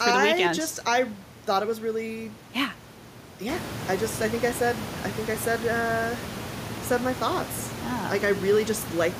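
Listening to this speech recording, nothing stood out as a technical problem; the only thing of note is the room's own background noise, which rises by about 11 dB at around three and a half seconds and still sits about 11 dB below the speech.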